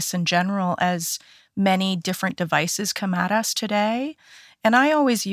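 No faults can be heard anywhere in this speech recording.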